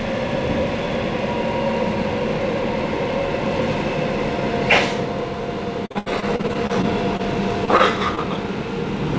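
From 5.86 to 7.21 s there is repeated packet loss, with a robotic sound. Packets keep failing to arrive in time. The receiver patches each hole by extending the last sound, and the next hole comes soon after. Roughly eleven such holes fall in this stretch. The longest runs about 74 ms. About 23 percent of the span is patched-in sound, and some 200 ms of real audio is simply gone. The result is choppy, with pieces missing.

At 7.65 to 7.69 s comes a short concealed packet loss. About 20 ms of audio never reached the decoder. The gap was bridged by continuing the previous sound, then blended back into the real signal. It is heard as a brief smear or wobble.

Two short stalls from late packets follow, at 7.77 to 7.81 s and at 8.15 s. Each time the jitter buffer ran dry. The last sound was stretched for about 20 ms until the packet turned up, and playback then carried on from the same place. 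Nothing is lost. The sound is just held a touch too long, with a faint buzz or dip. The call path cuts everything above 8 kHz, which fits G.722 at 64 kbps.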